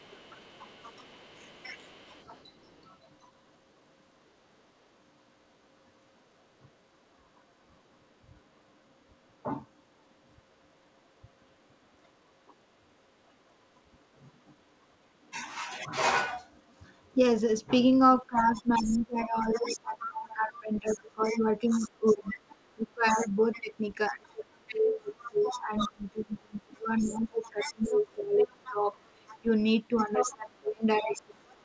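Other side's voice leaking through, 0.0 to 2.88 s: a faint second voice, roughly 25 dB below the talker, sits under the opening, likely because the echo canceller left some loudspeaker sound in the microphone signal. Within it, speech suppressed in double talk at 1.38 to 1.45 s briefly pulls the talker down by around 15 dB for about 70 ms.

From 18.16 s to the end, the same two faults return together. The talker sinks by as much as roughly 25 dB as both sides overlap, and from 18.19 s the other side's voice leaks through more strongly, only about 15 dB under the talker. The canceller, likely unable to tell the talker from the echo, turns both down. Throughout, the band-limited call sound, with nothing above 8 kHz, fits a 64 kbps G.722 path.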